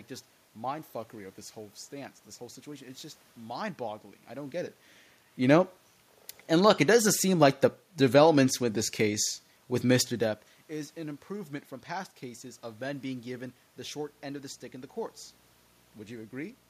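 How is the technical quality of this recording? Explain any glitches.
A buzz with a fizzy hash layered over it comes in at 13.96 s, right after "men being given the", and runs to the end of the clip at 16.70 s. This is video or display buzz: a screen or video cable is coupling interference into the audio path, so the picture's 60 Hz field rate is heard as a rasping hum with hash above it. It sits roughly 25 dB under the speech. The room noise and the level shifts from the talker moving are normal parts of the recording, not faults.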